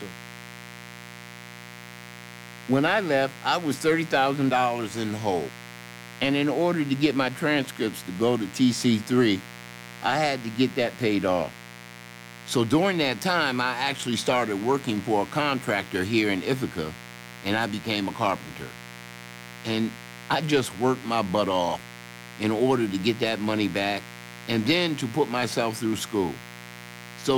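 From the first moment to the last, there's a mains buzz sitting under the speech, and it never lets up. It's built on 60 Hz: something like a dimmer or rectifier is injecting sharp switching spikes twice every mains cycle, so the hum comes with a long trail of harmonics climbing into the kilohertz range. That's why it sounds raspy rather than a smooth low hum, riding roughly 20 dB below the speech.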